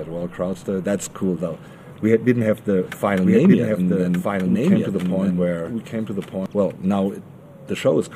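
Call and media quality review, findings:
Doubled audio track, 2.82–6.46 s: full-band copy trailing about one second behind, a few dB quieter, no decay. Likely a second, slower capture path mixed in. Starts and stops abruptly.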